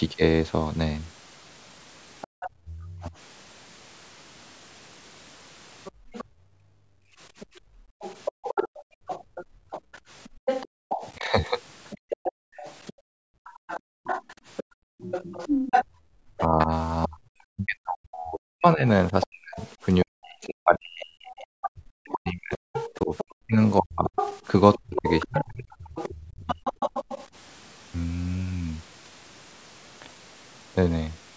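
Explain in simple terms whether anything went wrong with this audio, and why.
Something went wrong in three ways, all tied to a speakerphone-style call where the device tries to stop its own loudspeaker being picked up again.

Other side's voice leaking through: from 2.21 to 2.49 s, 5.84 to 16.41 s and 19.21 to 27.27 s, a second, quieter voice can be heard under the main talker. This is likely the far end coming out of the loudspeaker and not fully removed. Unlike the other two faults, this adds sound instead of taking it away.

Background gated by the echo canceller: at 2.27 to 2.33 s, and on and off between 5.92 and 16.16 s (about five seconds in total), the room sound suddenly drops to near silence and then comes back. Only the background vanishes here, not the talker.

Speech suppressed in double talk: from 2.45 to 3.13 s, briefly at 11.17 to 11.31 s, and across 16.38 to 26.59 s (about seven seconds affected), the main talker's voice dips, dulls or cuts out in pieces. 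This is likely because both sides spoke at once, and the system turned everything down. Here it's the talker, not the room, that disappears.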